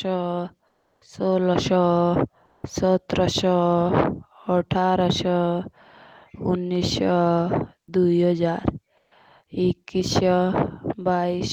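Comfort noise in place of the background appears three times in this speech clip: 0.67 to 1.01 s, 2.45 to 2.63 s, and 8.97 to 9.11 s. In each pause the natural background, sitting about 40 to 43 dB below the loudest speech, gives way to a flat, featureless hiss. It is about 6 dB quieter in the first gap, about 1 dB louder in the second, and about 8 dB quieter in the third. The likely cause is discontinuous transmission, with the receiver synthesising filler noise until speech resumes.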